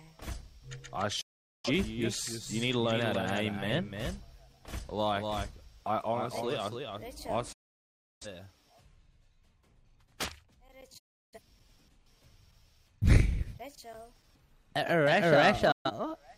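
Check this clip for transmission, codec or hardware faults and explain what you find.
The clip has four digital broadcast dropouts, at 1.21 to 1.69 s, 7.52 to 8.27 s, 10.98 to 11.40 s and 15.72 to 15.91 s. Each time, the receiver stopped getting decodable frames and muted until good ones returned. The sound fades out over about 8 ms into full silence, then resumes later, with the missing audio simply gone. Unlike concealment smearing or a hard click-edged cut, these are clean, short-faded holes.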